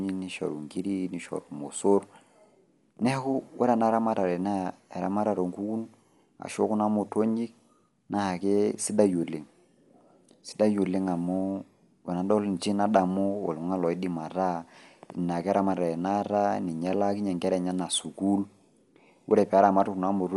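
Throughout the speech, the sound is dull, with nothing above 11.5 kHz. Rough, fluttering noise clings to tonal parts. The cause is likely Dolby Digital compression at a low bitrate, one that fits 64 kbps. The encoder narrows the band. Starved frequency lines are refilled with dither noise.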